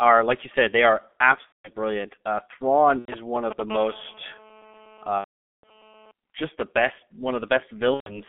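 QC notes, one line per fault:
Throughout: G.723.1 codec. The speech is muffled and hoarse, with heavy codec damage. Nothing survives below about 250 Hz or above 3.4 kHz. At 6.3 kbit/s with 30 ms frames, the coder's model of the voice updates only every 30 ms, so fast changes in the vocal tract get averaged together. Consonants smear into each other and the voiced sound picks up a rough, grainy edge.
1.46–1.70 s, 2.99–3.14 s, 5.18–5.84 s, 7.94–8.21 s: VoIP packet loss concealed by the speech codec. Each gap is a run of missing 30 ms frames that the decoder fills by carrying its last pitch and filter forward at falling gain. The sound turns into a fading buzzy tone or tinted noise. The longest gap is at 5.18 s and lasts about 450 ms, so most of it is muted after the first two lost frames. After each gap the speech comes back weak or distorted before it recovers.
2.89–3.61 s: GSM signalling bursts. 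A nearby 2G handset sending short bursts, as it does while setting up a call or message, has its radio pulses rectified in the audio circuit. The result is a galloping dit-dit-dit of short buzzes at about 217 Hz, roughly 10 dB below the speech. It overlaps the concealment gap at 2.99 s, so the ticking and the decaying fill-in are heard together.
3.71–6.11 s: GSM phone buzz. Here the handset is transmitting continuously on a call, pulsing about 217 times a second. The rectified bursts give a steady, hard, raspy buzz at 217 Hz with a dense harmonic series that has no relation to the speech. It sits about 20 dB below the speech and carries on through the long concealment gap at 5.18 s.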